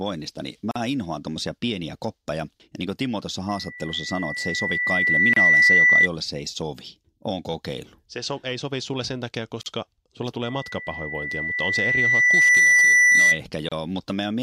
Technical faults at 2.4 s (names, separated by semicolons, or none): none